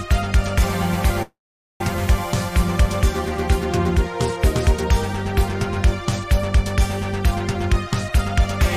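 At 1.22 s the sound stops moving forward and holds until 1.81 s. The last sound carries on briefly as a fading buzz or hiss. It then drops to silence for about 0.46 s. When the audio resumes, it picks up exactly where it left off. Nothing is lost, but a gap of nearly 0.6 s has been inserted. This is a call audio freeze. The likely cause is delayed packets leaving the jitter buffer empty. Everything after it now runs about 0.58 s late.

From 7.72 s to 8.19 s the audio hurries. It plays at about 108% speed, yet the pitch stays the same. This is a jitter buffer speed-up. The buffer was holding more audio than its target. To catch up, the receiver cut out many short pieces, each one or a few pitch periods long. In total, roughly 40 ms was removed. The result sounds rushed.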